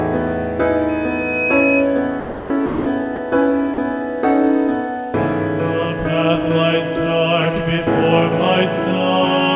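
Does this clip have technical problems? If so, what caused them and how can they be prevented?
Yes. A loudspeaker feedback squeal runs from 0.89 to 1.89 s: a 2.5 kHz tone swells over about half a second to roughly 5 dB above the audio, because the mic is re-amplifying its own speaker. Cut gain at 2.5 kHz or pull the mic off-axis from the speaker.

Then there's sound dropped by the voice detector, likely the sender's detector mistaking audio for background, swapping in steady comfort noise at 2.2–2.5 s, 2.66–2.86 s, 3.16–3.18 s and 3.74–3.78 s. Lower the detector's threshold or add hangover time so quiet passages keep getting sent.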